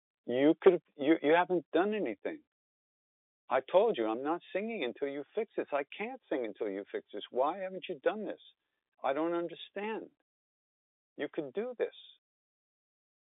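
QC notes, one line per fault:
0.66–0.69 s, microphone overload: just before "you you haven't done", a loud peak has its top flattened, adding crackle to that syllable. The signal ran about 5 dB past the converter's limit, likely from excessive input gain, cutting off roughly a sixth of samples there.
0.68 s, 1.68 s, 4.02 s, microphone volume stepped down: sound and background drop abruptly by about 3 dB, 3 dB and 2 dB. The first follows the overloaded peak, and the last falls between "I told" and "I'm not singing until". Each drop is likely the call software reducing the device's input gain in a single step, heard through an intact narrowband telephone path.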